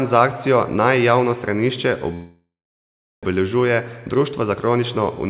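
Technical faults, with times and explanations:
2.14 to 3.25 s, call audio freeze: after "javno stranišče" the speech halts. The last sound stretches into a fading buzz, then about 0.75 s of silence. Likely the packets arrived late and the jitter buffer ran empty. Speech resumes where it stopped, about 1.1 s late, with nothing lost.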